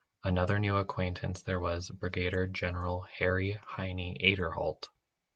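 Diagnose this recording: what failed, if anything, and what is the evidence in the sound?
Network loss covered by the codec: at 3.05 to 3.07 s there's a brief 20 ms rough, noisier patch in the speech with no gap. That's a lost packet rebuilt from error correction; what sounds like a single packet was replaced by the low-bitrate Opus copy carried in the next one.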